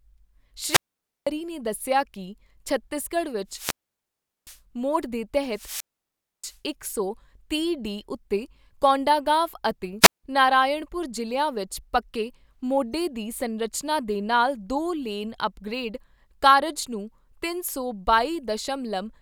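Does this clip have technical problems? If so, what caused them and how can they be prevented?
Yes. Wireless microphone squelch dropout occurs at 0.64–1.29, 3.48–4.61, 5.50–6.59 and 10.01–10.24 s: the speech fades into hiss, then the receiver mutes it for about 0.50, 0.76, 0.63 and 0.17 s. To prevent it, keep the transmitter within clear line of sight and range of the receiver, use fresh batteries, and choose a clean frequency, possibly with diversity reception.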